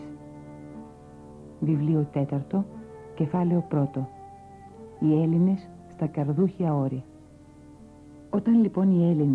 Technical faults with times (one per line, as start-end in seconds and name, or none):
none